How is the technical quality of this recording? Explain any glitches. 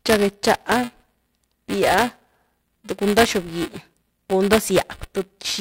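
The recording has a real problem: buffer tearing runs through the whole clip. The writer and reader of the audio ring buffer have drifted, so each period carries a small slice of speech a few milliseconds old, hard-spliced in. You hear a robotic buzz at 375 Hz, which fits a 128-sample buffer.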